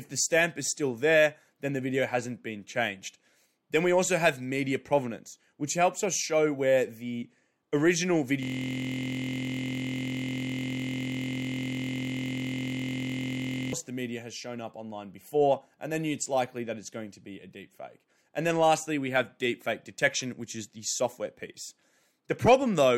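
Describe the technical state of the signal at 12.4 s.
At 12.4 s the signal is inside a system hang loop that runs from 8.43 s to 13.73 s, between "show where the original" and "the media has shown". The driver stalled while the hardware kept replaying the same 23.22 ms segment of its ring buffer, which fits a 1024-sample buffer. Repeated more than 200 times at 43.1 Hz, the fragment fuses into a steady, pitched buzz in place of the speech.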